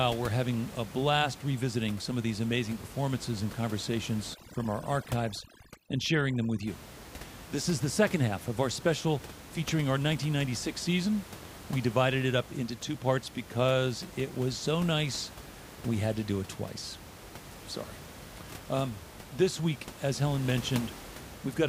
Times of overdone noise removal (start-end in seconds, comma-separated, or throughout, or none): 4.34-6.67